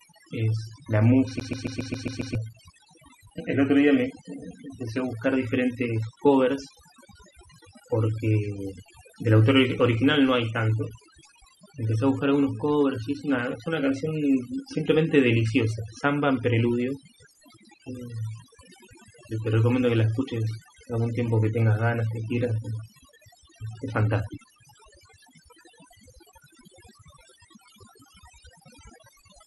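Right from the start, overdone noise removal leaves the background lowered and broken up into little twinkling specks, and quieter parts of the voice got gated away along with the noise bands. From 1.40 to 2.35 s it's a CD stuck on one turn: the same 136 ms slice repeats seven times, each jump marked by a brief mute, giving that quick, even stutter.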